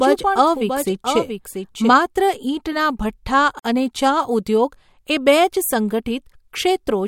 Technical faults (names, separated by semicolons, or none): doubled audio track; gap at a join of encoded pieces